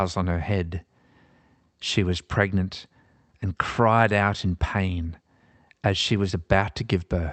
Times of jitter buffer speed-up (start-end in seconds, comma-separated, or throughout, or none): none